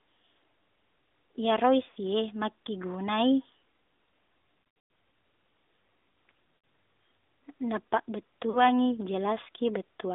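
Throughout, the speech sounds buzzy and synthetic, confined to roughly 250 Hz to 3.7 kHz, with plainly audible coding damage. This is the AMR narrowband mobile codec at a rate that sounds like about 10.2 kbps, rebuilding the voice from a vocal tract model.

Lost AMR speech frames cause brief warbles and dips at 1.90 to 1.98 s, 6.56 to 6.64 s and 8.50 to 8.64 s. Between 4.58 and 4.90 s, scattered losses stretch the sound and fade it, with the longest gap about 120 ms. In each case the decoder repeated the last good settings at falling gain.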